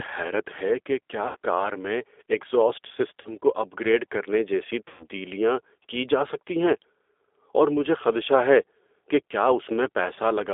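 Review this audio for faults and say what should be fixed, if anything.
G.729 codec, throughout the clip: the speech has been squeezed to 8 kbit/s and rebuilt from a vocal tract filter, a pitch predictor and a few pulses per subframe. The result has a plainly audible rough, slightly synthetic edge, and the line band runs only from about 300 Hz to 3.6 kHz, so the top of the voice is missing. Use a wideband or higher-rate codec such as G.722 or Opus on this path.

VoIP packet loss concealed by the speech codec, at 1.27–1.36 s, 3.21–3.27 s and 4.88–5.06 s: the gaps fall after "حیرت ہے کہ کیا" (about 80 ms lost, before "کار میں ایگزاسٹ"), after "کیا کار میں ایگزاسٹ" (about 40 ms, before "کو اپ گریڈ کرنے"), and after "اپ گریڈ کرنے جیسی" (about 120 ms). Each gap matches a run of two or more consecutive lost 20 ms packets. In each gap the decoder stretches its last pitch and filter into a buzzy tone or coloured noise that fades, and the voice stays weak for a moment after audio resumes. 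Reduce network loss or add forward error correction and a deeper jitter buffer.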